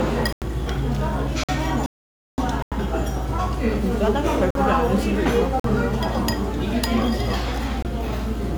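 Blocks of digital silence interrupt this recording of everyday sounds at 0.33, 1.44, 2.62, 4.51, 5.60 and 7.83 s, lasting about 93, 51, 93, 46, 46 and 23 ms. Each cuts abruptly to silence and back, the signature of an output buffer left unfilled in time. The 93 ms gaps fit a 4096-sample buffer, and the 46 ms and 23 ms ones fit 2048- and 1024-sample buffers. A rebuffering stall runs from 1.86 to 2.38 s: the player exhausted its downloaded audio, went silent for about 0.52 s, then resumed exactly where it stopped, so nothing is lost but time is added.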